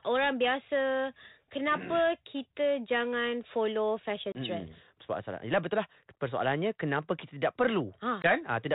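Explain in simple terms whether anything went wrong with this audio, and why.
Packet loss on an ADPCM call cuts brief silent holes at 4.32 and 8.22 s. Unlike a plain dropout, the speech returns slightly distorted while the decoder catches up.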